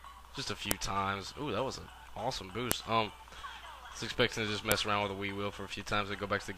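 At 0.71 s, 2.72 s and 4.72 s there is a sharp, loud click, a file header played as audio. The pieces were joined or streamed with their WAV headers left in, so those few dozen bytes play as samples. The clicks land every 2 s, which fits 2-second pieces, regardless of the underlying sound. A waveform shows a tall, near-instant spike at each time, and a spectrogram shows a thin vertical line spanning the full frequency range.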